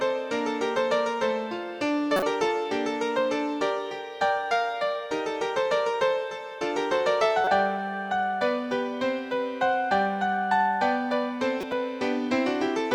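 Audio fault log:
2.16–2.23 s, 7.44–7.48 s and 11.60–11.73 s: corrupt frame decoded. The decoder played damaged compressed frames, and misread gains and codes put energy at the wrong frequencies. Each event is a short chirp or burst of noise lasting 30 to 120 ms, which points to a few frames each. The first two peak at about -10 dBFS and the last at about -20 dBFS. On a spectrogram each shows as a blocky vertical patch of stray energy, and on the waveform as an abrupt spike.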